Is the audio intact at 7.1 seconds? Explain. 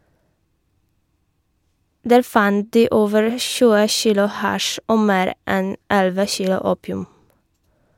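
Yes, at 7.1 seconds the speech plays through cleanly, with no dropout, click, distortion or other fault.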